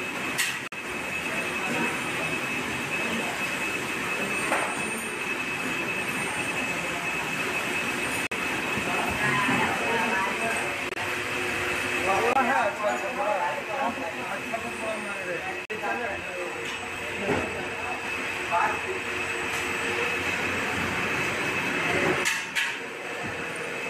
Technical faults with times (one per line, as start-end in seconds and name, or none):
0.66-0.74 corrupt frame muted
8.27-8.33 corrupt frame muted
10.89-11.01 corrupt frame muted
12.33-12.37 corrupt frame muted
15.65-15.71 corrupt frame muted